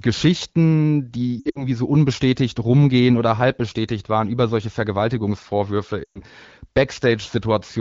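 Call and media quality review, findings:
Lost AMR speech frames at 1.39–1.68 s (before "so unbestätigt rumgehen oder") and 6.04–6.20 s: warbly dips where the decoder stretches the last good frame, fading. About 120 ms lost each.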